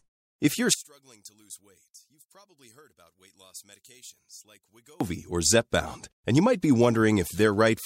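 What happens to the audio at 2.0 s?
At 2.0 s the speech has collapsed to a faint trace, roughly 28 dB below its normal level, and this holds from 0.74 s to 5.0 s. The likely cause is one channel inverted: with one side's polarity reversed, everything common to both channels cancels when they are summed to mono. The centred voice and its low end largely disappear, leaving only the small difference between the channels audible.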